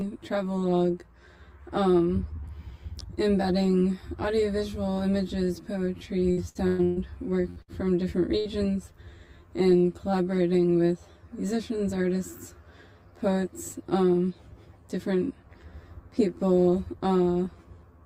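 Throughout the clip, a channel delay of roughly 10 ms between the two channels causes comb filtering when they are summed to mono. Cancellation at evenly spaced frequencies, starting somewhere around 40 Hz, leaves fixed notches that make the whole sound hollow and phasey.

From 6.31 to 6.99 s, repeated packet loss produces choppy, robotic sound. Four gaps, the longest 119 ms, are each patched by extending the preceding audio. About half of the span is concealed this way, and pieces are audibly missing.

Three bursts of packet loss follow, at 7.50–7.59 s, 7.62–7.71 s and 8.40–8.48 s. Each drops about 60 ms. The receiver holds and fades the last sound into a brief buzz or hiss, then resumes with that portion gone.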